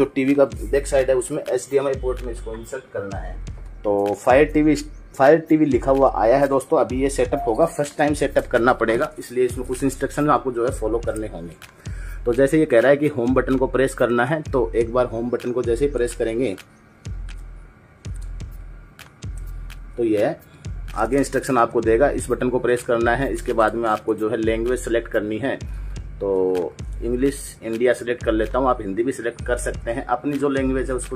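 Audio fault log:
17.28–17.34 s: damaged data in a compressed stream. Corrupt frames make the decoder misread and resync, giving a brief glitch.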